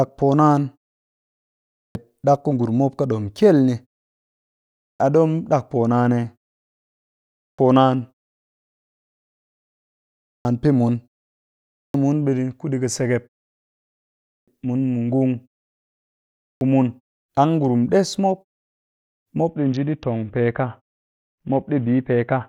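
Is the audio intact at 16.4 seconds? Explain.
No. At 16.4 s the sound falls inside a clipped start after a pause, spanning 16.06 to 16.61 s. After a 0.67 s silence the output device had gone idle and needed time to wake, so about 0.55 s of speech is lost and resumes abruptly.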